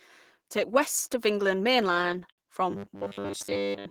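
Speech with repeated stalls (stutter) from 1.77 to 2.40 s: seven brief holds, the longest 69 ms, stretch the audio without losing any of it, unlike dropouts. From 2.70 s to the end a fixed 100 Hz robotic buzz covers most of the sound, likely from repeating 10 ms buffers, a steadier pitch than codec warble.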